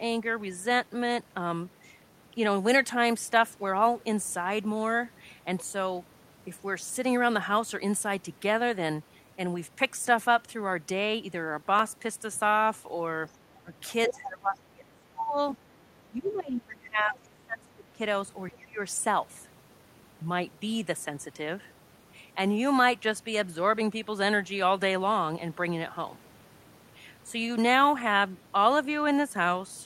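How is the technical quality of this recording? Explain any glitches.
The recording has echo-control problems clustered between about 13.3 and 18.8 s, where three related faults overlap.

Other side's voice leaking through occurs at 13.27–13.32 s, 14.08–14.14 s and 16.26–16.31 s. Each is a brief scrap of a second voice added on top of the talker, most likely loudspeaker sound that the echo canceller failed to remove from the microphone. The first and third scraps sit far below the speech, around 30 to 35 dB down. The one at 14.08 s is nearly as loud as the talker. Unlike the other two faults, this adds sound rather than taking it away.

Speech suppressed in double talk appears at 13.6–13.73 s, 14.08–15.38 s, 16.06–18.0 s and 18.51–18.81 s. The talker's own voice dips by up to roughly 25 dB, and by around 20 dB in the last event. The longest stretches cover about a second and about two seconds. 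The likely cause is that the far side was playing while this side spoke, and the canceller, unable to separate the two, turned everything down. What sets it apart is that the speech itself is lost, not just the background.

Background gated by the echo canceller occurs once, at 15.73–15.78 s. For about 50 ms the room sound drops by about 6 dB and then returns. Here the canceller clamped the microphone while the loudspeaker was active. It differs from the double-talk suppression because it is a short dip in the ambient bed rather than a cut into the talker's speech, and it is much shallower.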